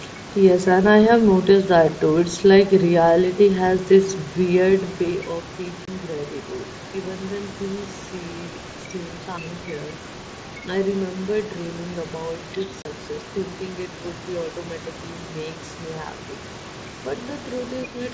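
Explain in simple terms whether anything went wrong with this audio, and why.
Three problems with the wireless headset link and the call's echo handling affect this speech.

First, unconcealed Bluetooth headset packet loss. Small chunks of audio travelling from the headset to the phone went missing, and nothing was done to cover the gaps. Silence or an idle pattern took their place. At 5.85 s about 22 ms of speech vanishes, and at 12.82 s about 30 ms. Each gap starts and stops abruptly, so you hear a tiny hole or click rather than a smooth pause.

Second, the other side's voice leaking through. Just before that second gap, from 12.52 to 12.58 s, a faint scrap of another voice slips into the recording. The likely cause is that the phone plays the far-end caller over a loudspeaker and its echo canceller did not fully remove that sound from the microphone, so a brief, quiet trace of it gets sent back.

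Third, speech suppressed in double talk. At the very end, from 17.86 to 18.02 s, the talker's voice suddenly dips and becomes noticeably quieter for about a sixth of a second. This likely happened because both people spoke at once. The echo canceller couldn't tell the talker apart from the loudspeaker's echo, so it turned everything down, taking the real voice with it.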